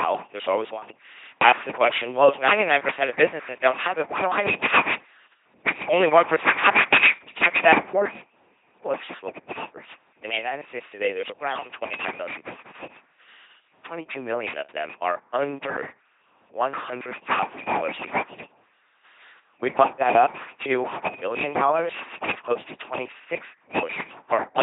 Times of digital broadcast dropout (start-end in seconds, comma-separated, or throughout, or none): none